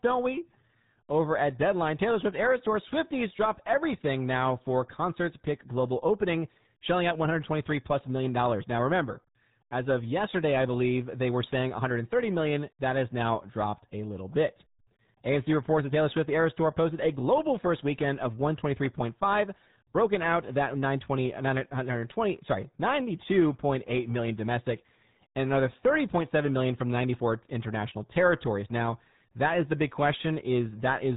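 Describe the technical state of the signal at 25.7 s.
At 25.7 s the speech carries the RealAudio 14.4 codec damage that runs through the whole clip. Its low-rate coding model, consistent with roughly 8 kbit/s dial-up-era RealAudio 1, leaves heavy codec damage, muffled and gargly. Nothing above about 3.8 kHz survives, so a spectrogram shows a flat ceiling with empty space above it. Within the band, harmonics look smeared and blotchy, and the waveform's fine detail is coarsened.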